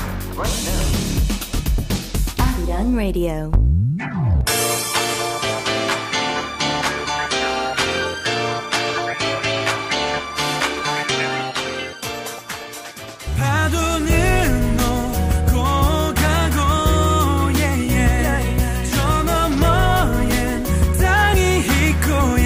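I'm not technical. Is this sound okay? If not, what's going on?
Yes, nothing in this sound stood out as a problem when I listened.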